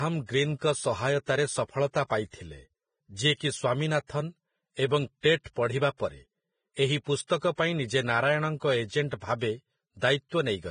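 Throughout, the speech sounds hissy and grainy. Nothing reaches above 9.7 kHz. The treble is coarsely quantised into noise. This is likely heavy Vorbis compression at a low bitrate near 20 kbps.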